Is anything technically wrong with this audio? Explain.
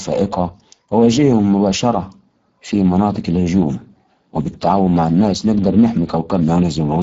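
Yes. The speech carries Speex codec damage from start to finish. Speex is a CELP coder that models the voice as a filter driven by a coded excitation signal. At a rate consistent with roughly 10 kbps, too few bits go to that excitation, so the voice comes out noticeably noisy and hoarse rather than clean. The spectrum also stops abruptly at 7.7 kHz, with nothing above it.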